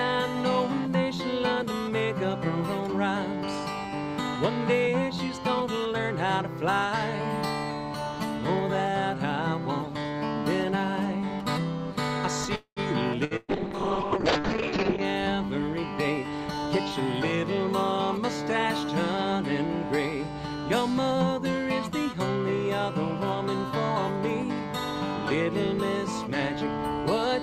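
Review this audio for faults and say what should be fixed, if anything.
At 12.55 to 12.80 s a call audio freeze, likely from packets held up in transit, emptied the jitter buffer; the sound trails off, falls silent briefly, then resumes intact.

Two bursts of packet loss, at 13.25 to 13.34 s and 13.37 to 13.51 s, dropped about 60 ms and 120 ms; each gap is filled with fading held sound, then audio skips ahead.

A call bitrate drop from 48 to 6 kbps, with bandwidth narrowed from 20 to 8 kHz, makes 13.51 to 15.10 s sound coarse and muffled.

A jitter buffer speed-up trimmed pitch periods at 18.17 to 19.18 s (105%, under a tenth of a second removed) and 26.64 to 27.29 s (107%); the audio sounds hurried at unchanged pitch.

Preventing these means stabilising the network path with better congestion control and redundancy, so packets arrive steadily and the bitrate stays up.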